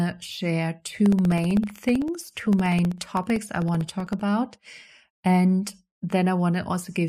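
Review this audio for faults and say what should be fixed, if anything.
Periodic USB or driver dropouts: from 1.00 s to 4.20 s, something blocks the USB bus or audio driver every 64 ms, and each time roughly a millisecond of audio is lost and filled with silence. Over those few seconds that makes around fifty tiny gaps, heard as a steady ticking at about 16 per second that rides on the speech and falls quiet whenever the speech pauses. To prevent it, find and disable the background task or driver polling that periodically stalls the bus, or raise the audio buffer size so playback can survive the brief stalls.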